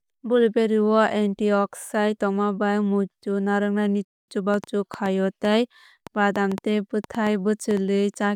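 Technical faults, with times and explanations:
4.05 to 4.28 s, rebuffering stall: the speech drops abruptly into silence for about 0.23 s, then picks up at exactly the point where it broke off, with nothing skipped. The gap sounds like a hard pause rather than a dropout because no audio is missing. Playback ran out of downloaded data and waited for more to arrive before continuing, so the clip simply gains that quarter-second of dead air.
4.54 to 7.78 s, train of clicks: a run of sharp ticks or pops sits on top of the speech and carries on through the pauses, about four per second at an uneven pace, around fifteen in all. They stand out at about 10 dB above the speech level and share much the same shape. Repeated pulses like this most likely come from electrical interference from nearby equipment or a faulty connection or power supply injecting spikes into the signal.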